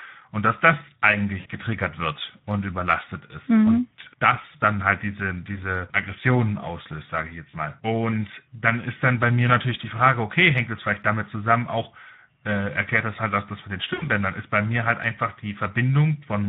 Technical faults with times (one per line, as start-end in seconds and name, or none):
0.00-16.49 Speex codec
1.39-1.48 VoIP packet loss concealed by the speech codec
7.49-7.56 VoIP packet loss concealed by the speech codec
13.93-14.09 VoIP packet loss concealed by the speech codec